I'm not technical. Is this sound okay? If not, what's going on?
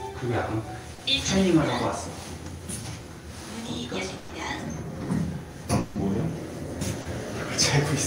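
No. The sound has gaps where pieces never arrived over the connection.

At 0.95 to 1.01 s and again at 7.01 to 7.07 s there is short concealed packet loss. About 40 ms went missing each time. The player patched each hole by stretching the sound just before it, so you hear a quick smear or wobble.

At 4.17 to 4.31 s comes a burst of packet loss. About 120 ms never arrived. The player kept the last sound going and let it fade, so there is a brief held buzz or hiss. The sound then picks up later, with that stretch gone.

At 5.79 to 5.97 s about 160 ms is missing again, covered by a fading continuation of the previous sound rather than silence. The likely cause is a long network dropout, where the connection briefly delivered nothing at all.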